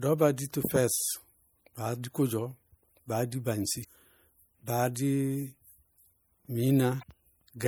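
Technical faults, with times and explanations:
Throughout: MP3 compression, likely the cause of the plainly audible damage. Bits run short at a rate that fits 64 kbps, so the encoder cuts the treble and drops weak frequency lines that flicker between frames, leaving the speech watery and swirly, with metallic s sounds and smeared attacks.
3.80 to 3.85 s and 6.99 to 7.03 s: damaged data in a compressed stream. Corrupted frames, the first just after "baá di baŋsi", make the decoder lose sync and hunt for the next frame header, heard as a brief chirp or blip.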